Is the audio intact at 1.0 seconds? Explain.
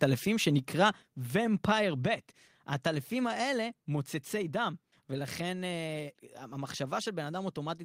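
No. At 1.02 s the microphone volume stepped down. The calling software likely judged the input too hot and cut the device's input gain in a single jump rather than easing it down. Because the change happens at the capture stage, everything the microphone picks up is affected at once: the speech and the background both drop by about 4 dB abruptly, and the level stays lower from that instant onward.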